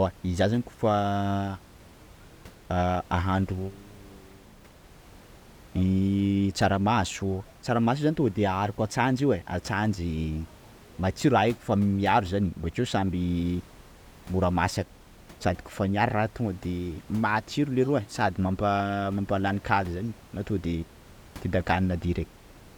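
Nothing stood out on listening to this speech recording, apart from some ordinary room noise sitting about 25 dB below the speech.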